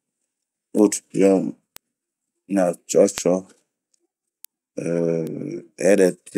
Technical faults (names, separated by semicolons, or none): bit error spike